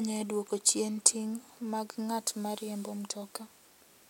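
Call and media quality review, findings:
Nothing stood out on listening to the speech; no findings to log.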